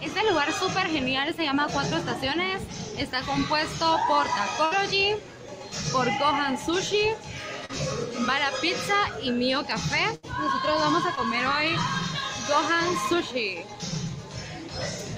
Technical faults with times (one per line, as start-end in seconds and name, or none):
4.65-4.73 burst of packet loss
7.65-7.71 short concealed packet loss
10.15-10.25 burst of packet loss
11.15-11.19 short concealed packet loss